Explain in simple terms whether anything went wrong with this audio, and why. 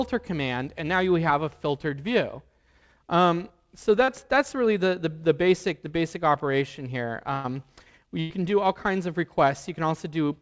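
Yes, a few things went wrong, all from parts of the audio getting lost on the way through a call connection.

At 4.04 to 4.10 s there is a short concealed packet loss. About 40 ms never arrived, and the receiver covered the gap by stretching the sound just before it, so you hear only a tiny smear or wobble. It is too short to fade.

At 7.34 to 7.46 s and again at 8.20 to 8.32 s there is a burst of packet loss. Each time about a tenth of a second went missing. Because the gap is longer, the stand-in sound is held and fades, becoming a buzz or hiss, and the audio picks up further on with that piece gone.

The call connection itself also removes everything above 8 kHz, which softens the sound.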